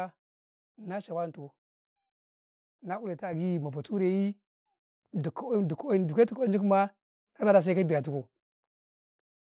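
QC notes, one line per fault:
3.33 s and 4.35 s, microphone volume stepped up: the call software judged the input too quiet and raised the device's input gain in two single steps, first by about 7 dB, then by about 2 dB. The speech and the room noise jump together, so on the waveform the envelope and noise floor sit abruptly higher from each point onward, and on the spectrogram every band brightens at once across the 4 kHz band limit of the G.711 call path.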